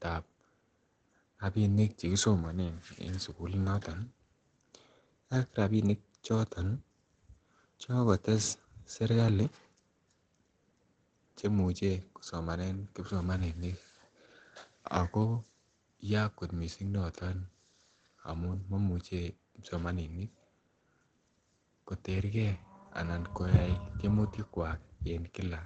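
From start to finish the speech sounds muffled and hoarse, with nothing at all above about 8.8 kHz, and the compression damage is plainly audible. That's most likely Opus compression at a low rate, which fits something around 16 kbps with the encoder in its speech-oriented SILK mode. At that point it stops trying to keep the full spectrum, narrows the bandwidth to wideband, and models the voice coarsely, which is where the dull, rough quality comes from.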